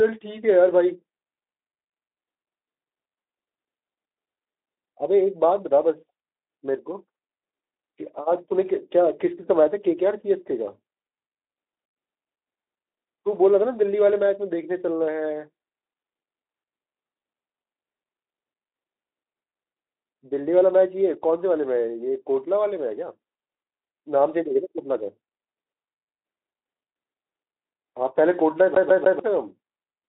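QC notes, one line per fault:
28.74–29.19 s, CD stuck on one turn: a scratch kicks the laser back by one track at the same point of each rotation, so the player keeps rereading the same short stretch instead of moving on. The speech locks into a 0.15 s fragment that plays three times, with a brief mute at every jump, giving a rapid, even stutter of about seven repeats per second before playback continues through the narrow, phone-like band of the Speex path.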